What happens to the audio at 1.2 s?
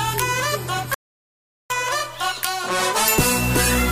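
At 1.2 s the sound sits inside an audio dropout to silence that runs from 0.94 s to 1.70 s, so about 0.76 s of material is simply gone. The signal cuts off abruptly mid-flow and returns just as suddenly, with silence between. The likely cause is a lost input while recording carried on writing silence. Unlike a natural pause or a noise gate closing, the gap holds no room tone or residual hiss at all.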